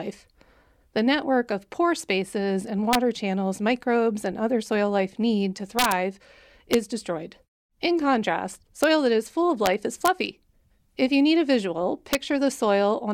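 The speech has integer overflow cracks at 2.93 to 2.95 s, 5.79 to 5.92 s, 6.73 s, 8.84 s, 9.66 s, 10.05 to 10.08 s and 12.13 s. Each time a loud peak pushes only about 0 to 2 dB past the integer ceiling, the sample wraps around to the opposite extreme instead of being held at the limit. You get a harsh, snapping crack far nastier than ordinary clipping.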